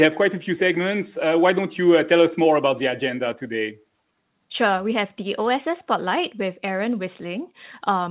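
No technical faults are audible.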